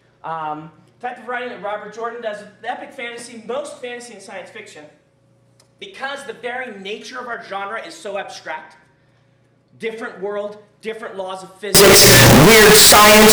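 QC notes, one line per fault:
11.75–13.32 s, float read as integer: the last stretch of the clip suddenly becomes extremely loud and harsh, with a buzzy, clipped quality and background noise pushed up to the same level as the main sound. The waveform flattens into a near-square shape sitting at an almost fixed, high level. The likely cause is 32-bit float samples being read as 32-bit integers, so the sign and exponent bits, not the actual amplitude, set each sample's value.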